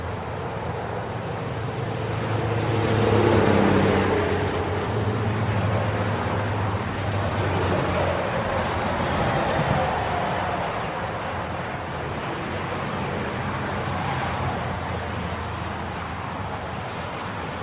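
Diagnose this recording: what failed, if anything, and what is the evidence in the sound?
Nothing in the sound stood out as a failure at any stage when listening through this recording.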